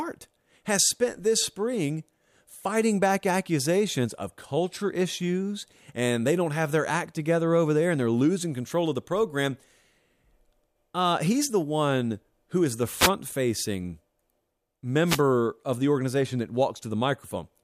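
At 12.97 to 13.10 s, after "one who is the", and again at 15.05 to 15.22 s, before "of the organization that", short swishes of static mark a wireless microphone noise hit, where the analogue FM signal faded and receiver hiss broke through. Unlike digital dropouts, the sound is hissy rather than silent.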